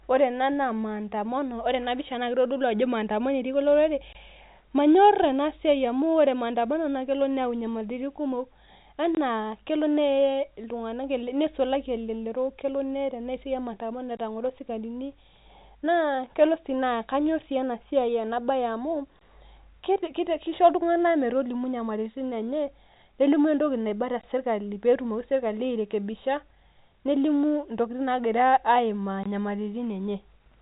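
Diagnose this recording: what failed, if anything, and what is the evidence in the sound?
Short, hard-edged silences of about 21 ms break the speech at 4.13, 9.15, 14.17 (just before "etang'oro sikarini"), 19.19 (just after "bae amu"), 24.21 and 29.23 s. The exact 5.0 s spacing points to a gap between chunks at playback or storage, with each chunk starting late.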